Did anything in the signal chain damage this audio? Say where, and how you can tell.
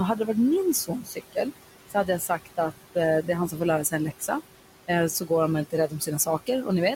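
Yes. The damage is in the call processing stage, from noise suppressor artifacts present throughout. The room noise, about 13 dB below the speech, is cut by about 17 dB. The suppressor gates it frame by frame, so the background sinks between phrases and swells back up underneath the speech. That level pumping, tied to the speech, is how it differs from room noise that is simply quiet, which would sit at a steady level.

The same stage also causes speech cut by the noise suppressor in three stretches. Between 0.87 and 1.37 s, about a third of a second is turned down, by up to about 16 dB. Between 1.89 and 4.29 s, somewhat under half a second in total drops by up to about 14 dB. Between 5.65 and 6.67 s, about a fifth of a second drops by up to about 16 dB. The affected speech sounds swallowed rather than missing. It sinks together with the background, whereas a network dropout would leave a gap or a glitch.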